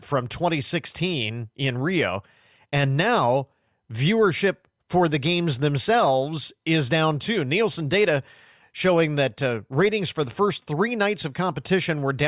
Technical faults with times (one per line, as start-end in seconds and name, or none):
none